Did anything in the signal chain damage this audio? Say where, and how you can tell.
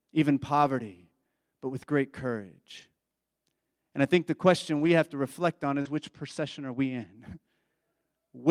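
Yes. Network-level loss, rescued by forward error correction, occurs at 0.61–0.67 s, 2.77–2.83 s, 4.75–4.89 s (between "I think the" and "have to reflect") and 5.85–5.87 s. Low-bitrate redundant copies fill these stretches, so there is no gap. Instead, the audio turns briefly rougher and noisier, which separates this from concealment.

Short concealed packet loss occurs at 5.81–5.87 s, also a network fault. About 40 ms never arrived, and the decoder extrapolated 36 ms from the preceding sound, producing a smear or wobble rather than grainy decoded audio. Its final moments coincide with the error-correction repair at 5.85 s.

Channel delay (comb filtering) runs from 5.67 to 7.16 s, just after "have to reflect". One channel lags by about two samples, roughly 0.04 ms, before the mono fold-down. With the first notch near 10 kHz, it only dulls the top, a gradual loss rather than a codec's sharp band limit.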